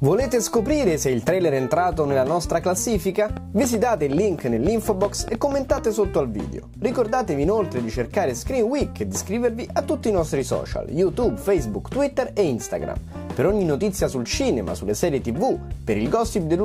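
From 3.37 to 5.79 s a train of clicks, roughly fifteen, ticks irregularly at about 5 per second, likely from interference, showing as sharp waveform spikes and thin vertical spectrogram lines.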